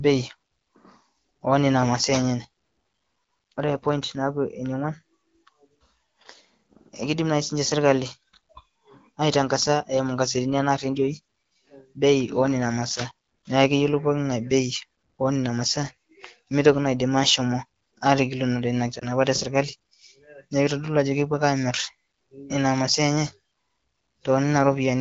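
Speech carried over AMR wideband (HD Voice), with light coding texture consistent with the 12.65 kbit/s mode, has a brief warble from 18.99 to 19.07 s, from lost AMR speech frames. The decoder fills the gap, which fits a single lost 20 ms frame, by repeating the last pitch and vocal tract settings at reduced gain. That gives a smeared dip rather than the hard silent gap or click of a raw dropout.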